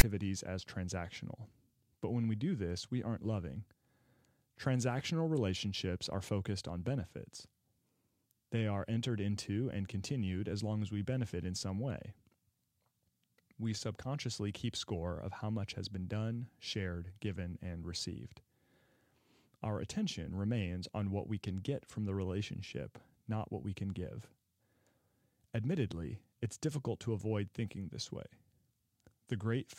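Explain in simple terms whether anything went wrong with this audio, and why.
Something did go wrong, right at the start. From 0 to 0.03 seconds there is a short, harsh rasp, followed by a brief moment of silence. This is the fault called file tags played as audio. The file carries a block of text labels. The player read those labels as if they were sound. The letters came out as a loud, lopsided buzz. The blank filler after them came out as silence.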